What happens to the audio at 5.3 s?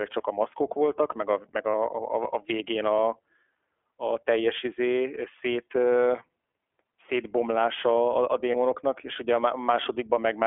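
At 5.3 s the speech carries the same iLBC codec damage present across the whole clip, not a separate event. The sound is confined to a telephone band of roughly 300 Hz to 3.4 kHz, so it is thin and muffled. Because each 20 ms frame's excitation is coded independently of the previous frame, the speech sounds rough, buzzy and faintly synthetic. The artefacts are plainly audible, and the quality fits the codec's 15.2 kbps mode.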